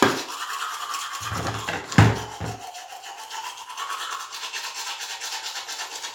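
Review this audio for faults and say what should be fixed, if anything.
No faults turn up in this audio, so nothing needs to be fixed.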